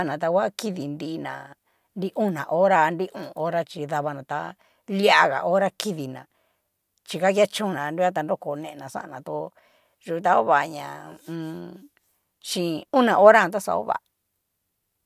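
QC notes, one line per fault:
Speech recording checked; no faults heard.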